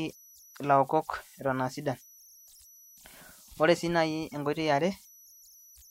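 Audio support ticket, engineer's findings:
Converter idle tones throughout. Delta-sigma ADC/DAC running undithered, so the modulator locks into repeating bit patterns at low input level. Result: a whistle around 5 kHz in speech pauses, grainy noise under quiet passages, about 29 dB below the signal.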